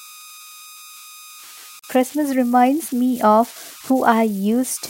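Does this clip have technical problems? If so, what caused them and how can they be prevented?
Yes. A delta-sigma converter running without dither fell into repeating bit patterns on small input, producing converter idle tones: throughout the speech a tone around 1.5 kHz sits about 22 dB below the signal. Adding dither at the converter prevents this.

Separately encoded pieces were joined without trimming encoder start delay and end padding, causing a gap at a join of encoded pieces: from 1.79 to 1.84 s the speech breaks into a 44 ms gap, then resumes where it stopped. Trimming both before joining prevents it.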